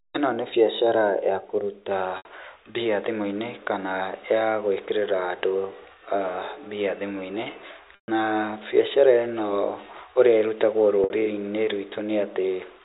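Packet loss with pitch repetition interrupts the speech at 2.17 to 2.25 s, just after "nĩ biacara ya kũruta", then at 7.95 to 8.08 s and 11.04 to 11.10 s. The receiver loops the last pitch cycle and fades it, giving a brief buzzy hold. The 130 ms gap dies into silence before speech cross-fades back.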